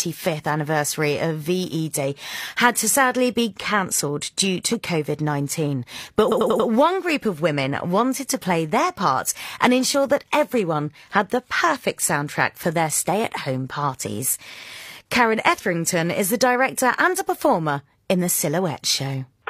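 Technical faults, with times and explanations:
6.27 to 6.64 s, repeated frames: a block of about 93 ms, consistent with two compressed frames, plays four extra times, adding 0.37 s and producing a rapid stutter. On a waveform, identical segments sit back to back, and a spectrogram shows the same pattern tiled.
14.49 to 14.68 s, repeated frames: a 93 ms block repeats twice, adding 0.19 s, with the same stutter.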